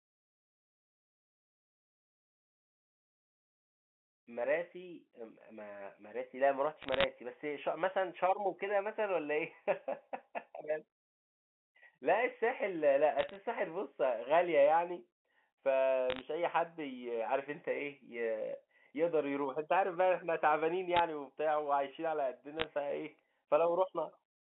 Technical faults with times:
6.82-7.04 bit errors on a digital phone line
13.19-13.36 bit errors on a digital phone line
16.10-16.21 bit errors on a digital phone line
20.96-20.99 bit errors on a digital phone line
22.60-22.64 bit errors on a digital phone line

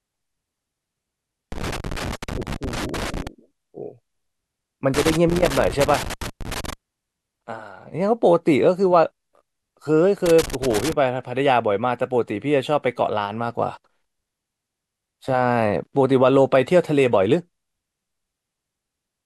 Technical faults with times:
1.52-3.27 loose connector crackle
4.94-6.73 loose connector crackle
10.26-10.93 loose connector crackle

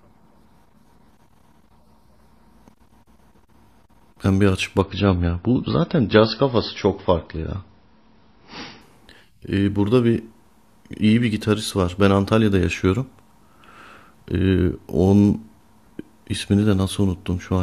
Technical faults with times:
4.81-8.81 adaptive stream at a lower bitrate

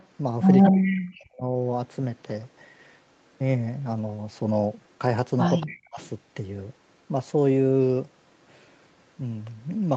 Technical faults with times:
0.00-0.06 echo leak
0.63-1.06 echo leak
0.69-1.43 speech suppressed in double talk
5.60-6.09 echo leak
5.63-6.00 speech suppressed in double talk

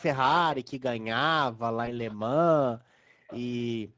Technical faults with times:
0.00-3.97 Speex codec
1.85-1.94 VoIP packet loss concealed by the speech codec
2.07-2.16 echo leak
3.27-3.69 echo leak

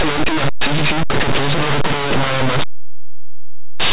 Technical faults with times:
0.00-3.93 linear audio read as companded

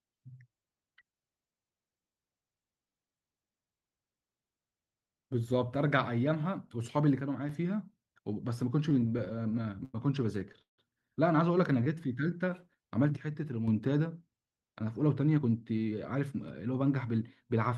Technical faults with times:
7.20-7.49 one channel drops out
8.89-9.96 repeated stalls (stutter)
10.62-10.80 call audio freeze
11.58-12.87 jitter buffer slow-down
11.84-11.88 short stall from a late packet
13.17-13.68 one channel drops out
14.73-17.05 jitter buffer speed-up

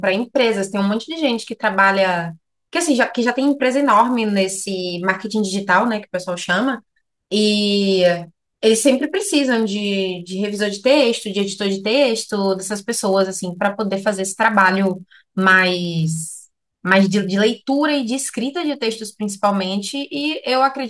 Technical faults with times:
0.00-20.90 resampler restarted on every block

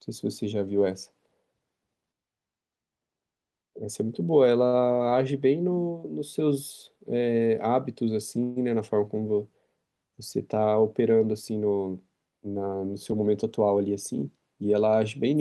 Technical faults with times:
4.67-4.75 short stall from a late packet
8.43-8.58 call audio freeze
12.74-14.23 jitter buffer speed-up

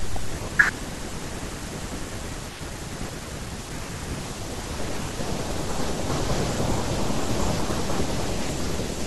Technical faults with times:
none

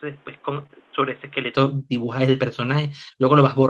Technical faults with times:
0.00-1.55 input switched to a poorer device
0.59-0.61 lost packet rebuilt from error correction
0.63-0.71 short concealed packet loss

